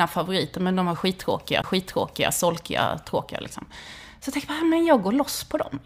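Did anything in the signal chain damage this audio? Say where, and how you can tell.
Yes. At 1.62 s a CD skip occurs in the playback stage. There is a very short mute of about 20 ms, and the speech then resumes from a different point rather than continuing where it left off. The laser pickup was knocked or met a flaw and jumped to another turn of the disc's spiral. The player muted briefly while relocking, so the material either side of the mute does not join up.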